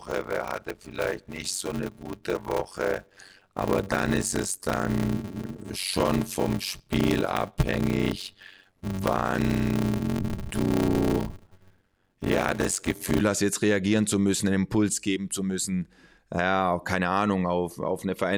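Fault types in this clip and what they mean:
Block size mismatch (padded): From the start until about 13.2 s, just before "hast jetzt reagieren zu", the speech carries a steady buzz at about 93.8 Hz and is slowed to 0.625 times normal speed while keeping roughly its normal pitch. One stage delivers shorter blocks than the next reads, and each block is topped up with silence. The buzz rate fits a 512-sample read block, with each block holding only about 320 samples of real audio.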